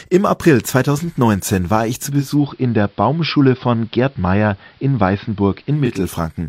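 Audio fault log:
1.96–6.11 s, digital radio blending to analogue: over a smooth cross-fade of about 0.42 s the speech turns dull and a steady hiss rises, staying around 35 dB below the voice, while loudness holds level. The hybrid receiver lost its digital stream and faded across to the same station's AM broadcast, whose narrow bandwidth strips the treble and brings the noise of the analogue path, before blending back to digital at the end.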